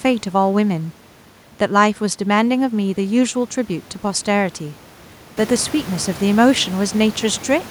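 No technical faults can be heard in this recording.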